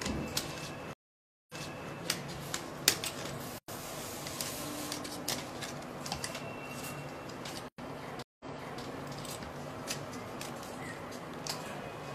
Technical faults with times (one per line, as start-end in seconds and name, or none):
0.93-1.91 stream reconnect
3.58-3.68 gap between chunks
7.68-7.78 gap between chunks
8.22-8.81 stream reconnect